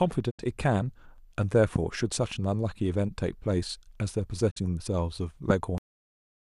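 At 0.29 s the speech cuts out in a digital broadcast dropout. The level fades to silence over about 20 ms, stays muted until 0.41 s, and then returns partway into the programme. The receiver stopped decoding because frames were missing or failed their checks. The gap in the audio covers roughly 72 ms, which fits three lost frames, and whatever was broadcast during that time is gone. There is no smear or repeat, only a clean hole in the speech.

From 1.76 to 1.78 s a loud pop lands on top of the speech and peaks at roughly 15 dB above it. The speech carries on underneath without any break. A sharp transient like this is likely caused by a voltage step or pulse entering the chain, for instance from a switch, a connector or a static discharge, with the downstream circuits shaping it into a short thump.

A second digital broadcast dropout runs from 4.49 to 4.58 s. It has the same roughly 20 ms fade to silence. 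About 48 ms of audio is lost here, which suggests two frames this time.

A second loud pop follows between 5.50 and 5.53 s and is stronger, at roughly 20 dB above the signal. It again sits on top of the speech as a single hard click-thump.

At 5.78 s the clip has a cut-off end. The speech stops mid-sound and drops straight to digital silence with no natural decay or room tail, because the final buffers were never written or played out.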